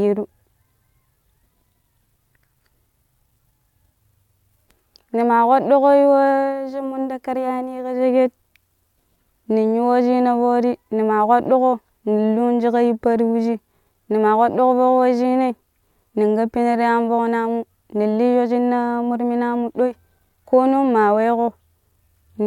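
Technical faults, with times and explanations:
No technical faults can be heard anywhere in the speech recording; the signal stays continuous and intact across the whole clip.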